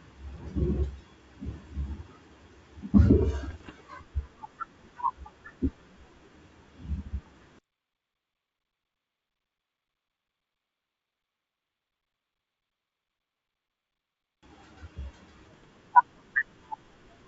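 Bit errors on an ADPCM link hit the speech three times: 0.36 to 0.43 s, 3.51 to 3.72 s, and 15.54 to 15.64 s. The call runs over G.722 wideband coding. Flipped bits corrupt the decoder's step size and predictor, so each error rings on briefly. The result is pops and rough, gritty bursts with short jumps in level. The second burst is longest. The error rate sounds low, well under one percent.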